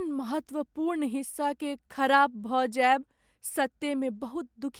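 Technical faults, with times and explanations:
Nothing in this recording stands out as a technical fault, so there's nothing to list here.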